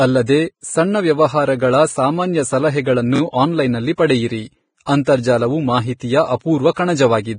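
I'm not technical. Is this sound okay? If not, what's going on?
No, it has a few problems. The whole clip sounds hissy and grainy, and everything above about 9.7 kHz is missing, so it's dull on top. That's likely Vorbis compression squeezed hard: the fine treble detail gets turned into a kind of noisy fizz.

Around 3.16 to 3.20 s, right after "ಸಾಮಾನ್ಯ ಸಲಹೆಗಳನ್ನು" and before "ಆನ್ಲೈನ್ನಲ್ಲಿ ಪಡೆಯಿರಿ", there's a repeated buffer. A tiny 23 ms scrap of sound plays two extra times with hard joins, so you hear a quick stutter. The playback ran out of fresh audio and replayed the last chunk.

At about 4.83 to 4.87 s, after "ಸಾಮಾನ್ಯ ಸಲಹೆಗಳನ್ನು ಆನ್ಲೈನ್ನಲ್ಲಿ ಪಡೆಯಿರಿ", there's pre-echo. A short hiss of about 41 ms creeps in just before a sharp sound, and the attack comes out softened. The compression spread its noise into the quiet moment ahead of it.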